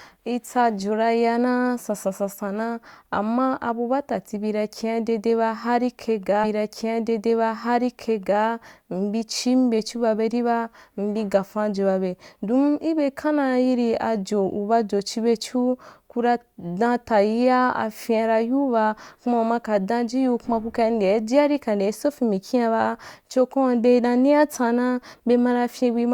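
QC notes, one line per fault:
6.43–8.43 s, stream segment repeated: right after "hari kai", two seconds of speech replay with a small blip at the jump back, because the player fetched or queued the same segment twice.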